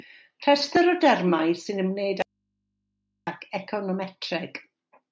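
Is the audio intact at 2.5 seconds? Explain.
No. At 2.5 seconds the speech is gone in an audio dropout to a faint residue from 2.22 to 3.27 s, just after "o dermau sy'n ymwneud". For about 1.05 s only mains hum remains, roughly 50 dB below the speech, likely an interrupted feed into a still-live input.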